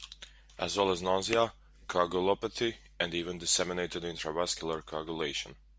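Listening to the speech here, nothing stood out as a technical fault at any point.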